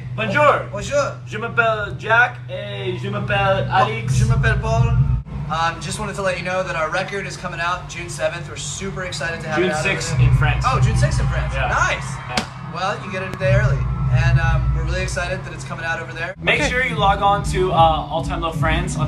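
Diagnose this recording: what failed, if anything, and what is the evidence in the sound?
A single loud pop at 13.34 to 13.36 s stands out around 10 dB above the surrounding sound, which carries on underneath. The likely cause is a voltage step or pulse from a plug, switch, static or driver glitch, shaped by the circuitry downstream.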